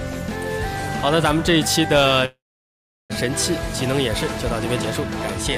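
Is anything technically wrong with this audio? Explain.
Yes. From 2.25 to 3.12 s there is a call audio freeze. The sound stalls, the last moment carries on briefly as a fading buzz, and then about 0.73 s is silent before the audio resumes exactly where it stopped. Nothing is lost, but roughly 0.84 s of filler has been inserted, so everything afterwards plays that much later. The likely cause is packets delayed in transit, leaving the jitter buffer empty until they arrived.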